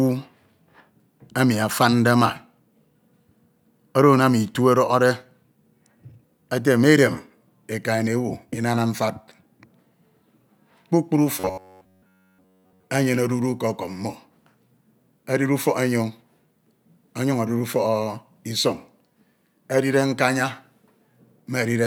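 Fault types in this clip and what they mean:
Robotic sound from repeated short buffers: from 11.40 to 12.84 s, just before "enyene odudu ke", the speech turns into a stiff metallic buzz locked at 93.8 Hz. That's likely a chunk of about 10.7 ms being looped while virtually all the real audio gets skipped.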